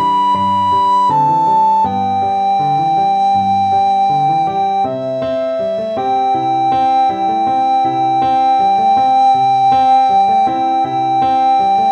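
No technical faults can be heard anywhere in the audio. There is nothing to point to at any moment of it.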